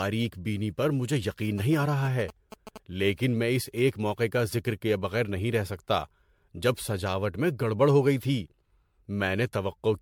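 This speech clip sounds swirly, smeared and hollow all the way through, with soft attacks and nothing above 19.9 kHz, which is likely generation loss from about seven rounds of MP3 encoding at roughly 100 kbit/s. From 1.58 to 2.78 s, between "بینی پر مجھے یقین" and "لیکن میں اس ایک", there are GSM signalling bursts, a galloping dit-dit-dit of short buzzes at 217 Hz about 15 dB below the speech, from a nearby phone's radio being rectified.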